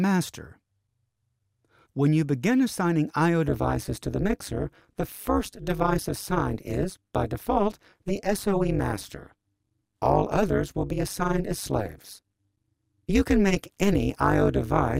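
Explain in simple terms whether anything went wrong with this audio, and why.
Yes, from 3.48 s to the end the sound takes on a harsh, metallic buzz. This is overlap-add ripple: the audio was rebuilt from short overlapping slices that don't blend evenly, so the loudness dips sharply about 200 times a second.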